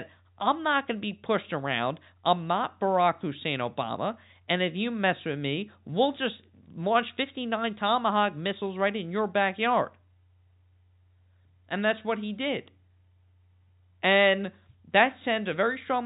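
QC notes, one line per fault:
No faults heard; the speech sits in a telephone band that stops near 3.8 kHz, consistent with G.711 mu-law coding working as intended.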